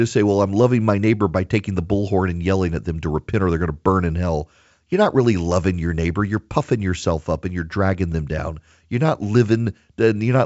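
Nothing is technically wrong with this speech clip, which comes through G.722 wideband telephone coding at 64 kbit/s with its content stopping just below 7.7 kHz.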